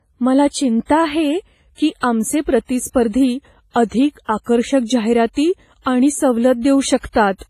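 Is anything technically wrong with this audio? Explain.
Yes. Throughout, the speech sounds washy and ringing, with hiss breathing along with it and nothing above 15.4 kHz, likely heavy WMA compression smearing quantisation noise, which fits a low bitrate.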